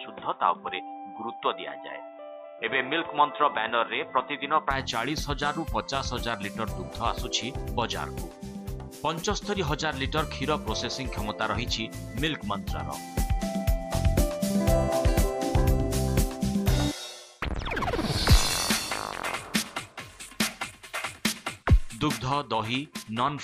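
From 0 to 4.71 s the sound is dull and boxy, with nothing above 3.8 kHz and faint background noise well below the signal; the input was likely switched to a poorer device. A spectrogram shows a flat ceiling ending at 4.71 s, and the waveform shows no gap.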